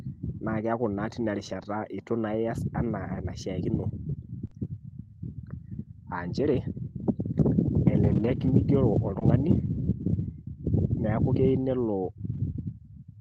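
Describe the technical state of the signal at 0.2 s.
At 0.2 s the speech signal is intact, with no audible fault at that moment.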